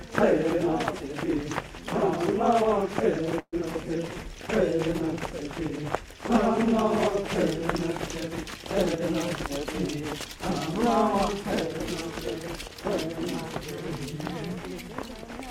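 The clip is everyday sound, with three network-timing faults packed into about a second and a half. From 3.39 to 3.56 s there is a call audio freeze. For 132 ms the last sound is carried on as a buzz or hiss that dies away, with the final 60 ms silent. The audio then resumes where it stopped, so nothing is lost but the stream now runs 132 ms late. The likely cause is packets held up in transit until the jitter buffer ran empty. On a spectrogram this looks like a frozen, smeared band fading into a dark gap. Just after, at 3.61 to 3.64 s, comes a skip ahead. Roughly 70 ms of audio is gone, dropped either on the way or by an overflowing jitter buffer, and the two sides are joined with only 8 ms of fill. It shows as an abrupt vertical seam where the spectral content changes without any transition, and as a sudden jump in the waveform envelope. Finally, from 3.87 to 4.90 s, a jitter buffer slow-down stretches that stretch by 65 ms, to 94 percent speed at unchanged pitch. 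The receiver repeated single pitch periods or bits of pauses to rebuild its reserve. Features therefore look horizontally stretched on the spectrogram, and the waveform shows runs of near-identical repeated cycles.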